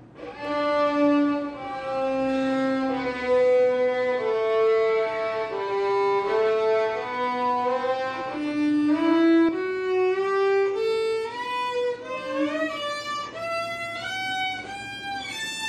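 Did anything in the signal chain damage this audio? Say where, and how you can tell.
Yes. From 0.45 s to 9.49 s there is a doubled audio track: a full-band copy trails about 150 ms behind, roughly 5 dB quieter, likely from a second, slower capture path. Unlike echo or reverb, it repeats once, without decay or room colour, and cuts in and out abruptly.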